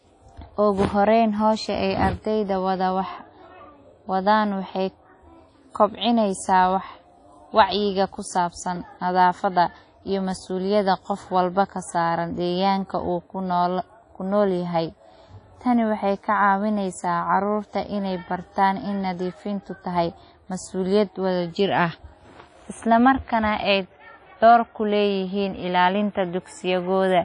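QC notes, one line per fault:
throughout, WMA compression: a low-bitrate WMA encoder, likely near 32 kbps, spreads quantisation noise across long transform blocks and zeroes weak detail. The speech rings and sounds washy, with hiss breathing alongside it and nothing above 10.1 kHz.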